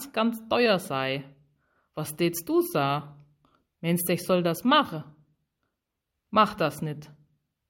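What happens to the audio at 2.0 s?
At 2.0 s the speech carries on intact, with no dropout, click, distortion or other fault.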